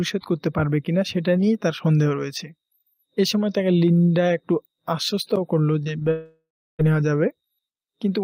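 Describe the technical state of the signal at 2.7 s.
The signal at 2.7 s is intact, with no fault audible at that moment.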